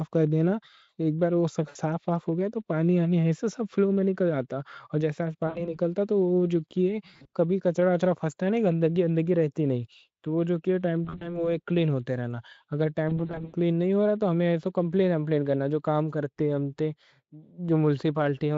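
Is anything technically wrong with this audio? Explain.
Yes. The speech has VoIP packet loss concealed by the speech codec at 1.69–1.77 s, 5.47–5.76 s, 7.13–7.27 s, 11.05–11.49 s and 13.09–13.55 s. These range from a single 60 ms gap up to 220 ms of losses scattered over 440 ms. In each gap the decoder extrapolates from its last pitch and filter with falling gain, so the sound smears into a fading buzzy tone or coloured noise and stays weak briefly after packets return. The Speex coding itself adds no more than faint damage.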